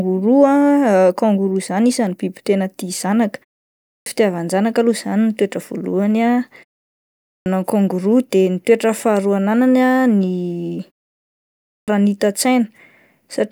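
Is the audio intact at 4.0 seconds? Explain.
No. A clipped start after a pause runs from 3.85 to 4.06 s. The output dozed during the 0.49 s silence, losing 212 ms, so speech begins abruptly.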